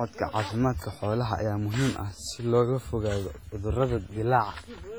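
The clip is speech, and two faults run through all of it. The first is low bit depth without dither. Quiet passages and word tails turn gritty, and the faintest stretches sputter between a couple of levels or drop to dead silence. The grain sits roughly 35 dB below the speech and tracks it rather than forming a steady hiss, which points to truncation to something like 8 bits. On a waveform the low-level parts show visible stair-steps, and on a spectrogram the distortion appears as a broadband smear that rises and falls with the speech. The second fault is heavy WMA compression. The audio sounds washy and ringing, and a hiss breathes with each syllable as quantisation noise spreads over tens of milliseconds around transients. This likely comes from a low bitrate, on the order of 24 kbps. A spectrogram would show pre-echo smearing ahead of onsets, and weak upper bands dropping out in patchy holes from frame to frame.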